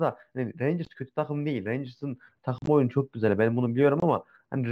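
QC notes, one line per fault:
Throughout: sample clock jitter. The converter's clock wanders by roughly a microsecond or two, so each sample lands slightly off its proper instant. The error is largest where the waveform moves fastest. This gives a faint hiss or roughness riding on loud and bright speech, around 45 dB below it, that disappears in the pauses. On a spectrogram it shows as a thin broadband haze under voiced and sibilant segments, absent in gaps. It is invisible on the waveform.
0.85 s, 4.00–4.03 s and 2.58–2.68 s: unconcealed Bluetooth headset packet loss. Stretches of the headset's speech stream never arrived, and nothing filled them in. At 0.85 s there is a 15 ms hole, and at 4.00 s a 22.5 ms one. Both have abrupt edges. Around 2.6 s about 60 ms is lost in pieces across 90 ms, with the longest gap 37.5 ms, so the speech sounds chopped and crackly there. The gap lengths are multiples of 7.5 ms, which fits whole mSBC frames being dropped, while the rest of the mSBC link passes speech up to 8 kHz. 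On the waveform the losses are flat-line dropouts with sharp cliffs. On the spectrogram they are vertical blank slots.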